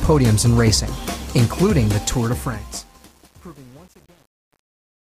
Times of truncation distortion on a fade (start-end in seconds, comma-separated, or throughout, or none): 2.04-5.09